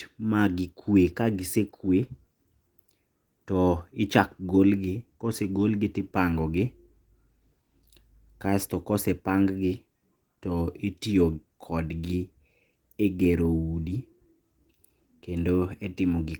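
No technical faults can be heard in the speech, which carries Opus voice compression in its hybrid mode, keeping the full band up to about 20 kHz and leaving only light coding traces.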